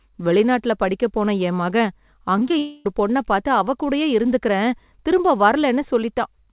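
From 2.37 to 2.54 s, just after "படிக்கப் போன என் மகன்", the speech turns choppy and robotic: repeated packet loss, with four short holes, the longest 22 ms, each patched by repeating the preceding sound. About a third of this span is synthetic fill, so 60 ms of real audio is missing.

From 2.59 to 2.86 s, right before "பொண்ண பாத்து அவ கூடயே", about 260 ms of speech is replaced by a stretched continuation of the last sound, a fading buzz or hiss, with no silence. The likely cause is a long network dropout, with the original audio in that gap lost. All of this is heard through the G.711 mu-law call path, which has nothing above 4 kHz.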